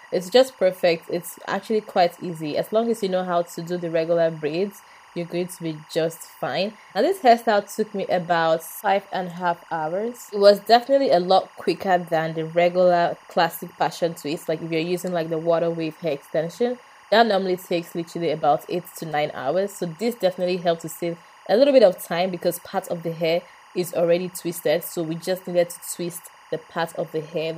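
Timecode bleed runs through the whole clip: a chirping warble roughly 30 dB under the sound, where 24 frame-per-second linear timecode leaks from a neighbouring line. A spectrogram shows steady flickering bands near 1 kHz and 2 kHz.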